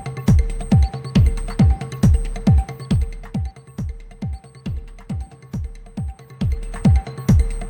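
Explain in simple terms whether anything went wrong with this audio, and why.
Zipper noise appears twice: as the sound drops in level from 2.6 to 3.62 s, and as it rises again from 6.13 to 6.87 s. The volume moves in small jumps about fifteen times a second, each leaving a tiny tick, unlike a smooth fader move.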